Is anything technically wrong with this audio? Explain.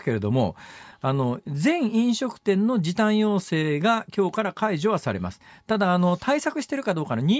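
No, nothing technically wrong can be heard in this speech recording, and the signal stays intact and steady throughout.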